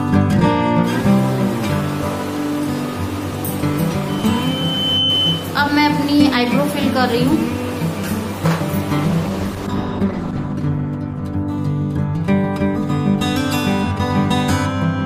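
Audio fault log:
4.08 to 5.60 s, loudspeaker feedback squeal: A single tone near 3 kHz swells over about a second until it is roughly as loud as the rest of the sound. A microphone is hearing its own loudspeaker, and at that frequency the loop gain exceeds one.
9.11 to 13.53 s, call bitrate drop: The sound turns coarse, watery and muffled, and is worst for about 1.4 s. This fits the encoder falling from around 128 kbps to about 12 kbps. At that rate it codes roughly and cuts the high frequencies.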